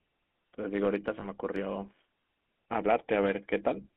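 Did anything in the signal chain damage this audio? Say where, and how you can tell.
Yes. Throughout the speech there is a buzzy, gravelly roughness, and the sound is confined to a narrow telephone band of roughly 200 Hz to 3.4 kHz. That points to the codec stage: the GSM full-rate codec. It rebuilds speech from a vocal-tract filter excited by a sparse, regular pulse train, and that coarse excitation causes the grit. The damage is plainly audible and fits 13 kbps full-rate coding.

Between 1.20 and 1.27 s the sound briefly freezes into a rough, metallic ring. This is lost GSM frames, at the network stage, and it points to a single lost frame, about 20 ms of signal. The decoder filled the gap by reusing the parameters of the previous good frame. That repeated excitation gives the ringing, and it stops before the audio could fade to silence.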